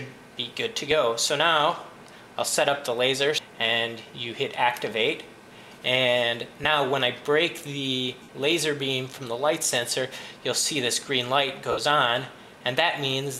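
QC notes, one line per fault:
6.64, 8.22–8.29, 9.90–9.92 and 11.71–11.78 s, lost LE Audio frames: short dropouts of about 15 ms at 6.64 and 9.90 and longer 60 ms ones at 8.22 and 11.71, which fits 7.5 ms LC3 frames. The decoder fills each gap by replaying the last spectrum with scrambled signs, so tones smear into noise and the longer gaps fade down instead of cutting off.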